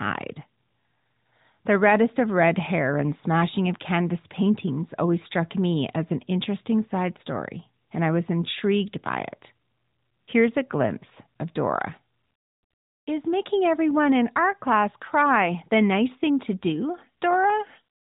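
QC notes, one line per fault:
Nothing stood out on listening to this speech recording.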